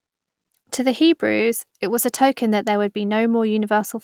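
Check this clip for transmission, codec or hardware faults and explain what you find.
Nothing in the signal is faulty: the speech carries Opus voice compression in its hybrid mode, keeping the full band with content reaching about 20.5 kHz and only light coding traces, consistent with a bitrate around 24 kbps.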